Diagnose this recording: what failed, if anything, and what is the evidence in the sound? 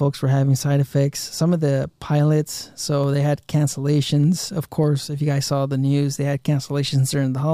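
A regular click runs through the speech roughly every 0.6 s, from about 0.64 s to 7.23 s, around ten in all, evenly spaced regardless of what is being said. That steady rhythm points to the driver or buffer stage, and the likely cause is clock drift buffer slips. Two devices on independent clocks disagree by a few hundred parts per million, so the buffer between them creeps until a handful of samples is dropped or repeated, and each slip leaves a small discontinuity that you hear as a click.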